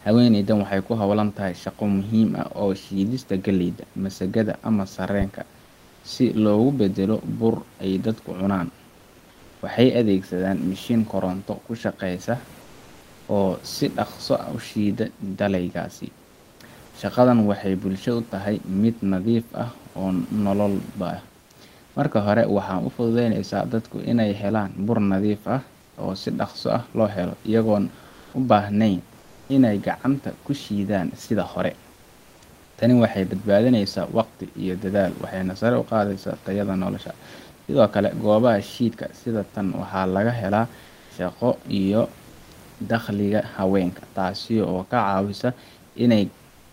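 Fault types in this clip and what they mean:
Comfort noise in place of the background: in the speech pauses, the real room noise, about 29 dB under the speech, gets swapped for a flat, featureless hiss. That's likely Opus DTX: the sender goes quiet and the receiver fills in noise shaped roughly like the background. It happens seven times between 16.85 s and the end at 46.72 s, in patches from 80 to 620 ms. Where it can be measured, the fill sits about 2 to 5 dB quieter than the real background.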